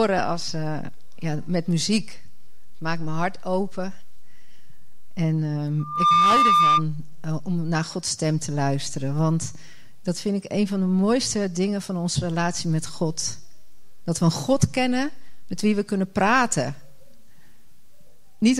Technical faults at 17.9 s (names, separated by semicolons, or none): none